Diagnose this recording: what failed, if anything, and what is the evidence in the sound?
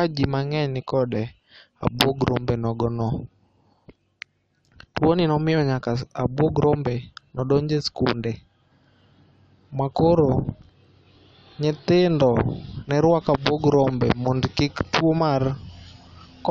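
Nothing failed; no stage of the chain shows a fault.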